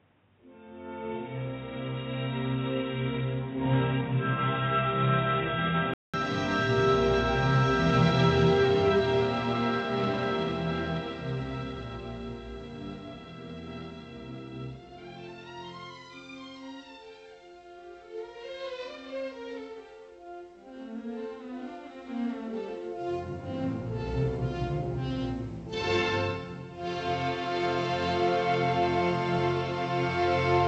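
From the start to 6.14 s the sound is dull and boxy, with nothing above 3.8 kHz, a faint background noise well below the signal, and a 200 ms gap before it clears at equal loudness. The input had likely switched to a poorer device.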